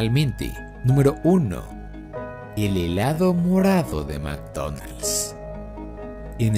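From 1.32 s to the end, the audio was likely run through time-stretching software that lengthened it to fit a slot while holding pitch, filling the extra time by repeating short fragments. The result is a time-stretched section playing at about 0.7 times the original pace: the tempo drops abruptly at 1.32 s with no change in pitch, and the stretched material drags.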